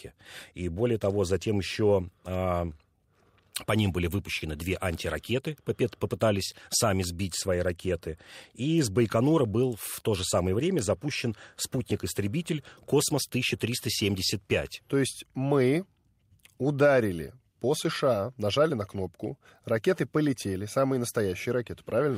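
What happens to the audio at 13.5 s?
At 13.5 s the speech carries on cleanly, with no audible dropout, click, distortion or other fault.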